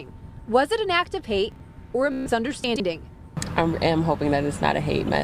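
The audio has chunks out of order at 1.52–1.60 s and 2.64–2.80 s: a 40 ms chunk plays one chunk late, then three chunks late, giving jumbled moments. A Bluetooth stutter at 2.12–2.31 s repeats a short slice as a buzzing stutter while about 137 ms of lost data is skipped, and the sound resumes further on.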